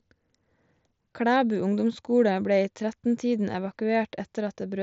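Speech carried over an mSBC Bluetooth headset link, with the band stopping at about 7.7 kHz as that wideband codec does and no fault to report anywhere in the clip.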